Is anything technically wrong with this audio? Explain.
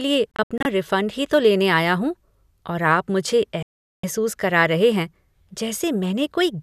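Yes. Digital broadcast dropout occurs twice in this speech clip. From 0.32 to 0.66 s, just before "रिफंड ही तो लेने", the receiver lost several frames and muted each time, so the sound breaks into short silent holes spread over about 336 ms. The holes total 168 ms and the longest lasts 72 ms. From 3.63 to 4.04 s, right after "हूँ और आप मुझे", 408 ms of lost frames drop the sound to silence. That part of the speech is gone and is not recovered when it resumes.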